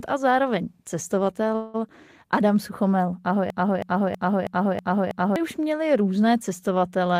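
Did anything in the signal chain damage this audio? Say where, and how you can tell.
Yes. At 1.55 s the sound stops moving and the last instant is drawn out as a fading buzz or hiss. This lasts to 1.76 s, about 185 ms. Then the speech resumes exactly where it left off. Nothing is skipped, so everything after is about 185 ms late. This is a call audio freeze at the network stage. Packets were likely held up in transit. The jitter buffer ran dry, and the receiver filled the gap by extending the last sound.

From 3.50 s to 5.36 s a short fragment repeats back to back. It is about 0.32 s long and plays six times, each copy identical. Normal speech returns with "už měli různé". This is a broken-record loop. A stall in the stream or playback stage likely left the last held fragment being sent again and again. The speech that belonged in that span never arrives. It is lost, not delayed.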